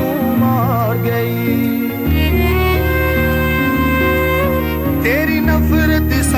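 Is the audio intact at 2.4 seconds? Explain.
No. A switching supply whistle runs through the whole clip, including 2.4 s. A power supply running in an audible burst mode or beating with another supply puts in a thin, high tone, drifting between 12.0 and 12.2 kHz, roughly twenty decibels under the sound. On a spectrogram it shows as a faint, slightly wandering horizontal line.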